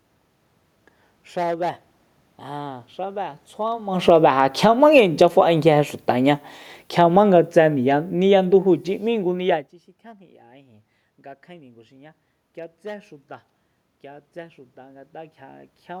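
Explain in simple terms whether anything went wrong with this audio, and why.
Between 3.93 and 9.67 seconds there is automatic gain falling. The recorder judged the input too loud, or its background noise too strong, and steadily turned itself down, so the speech and the room noise sink together, unlike the talker's own movements around 4 and 9.5 seconds.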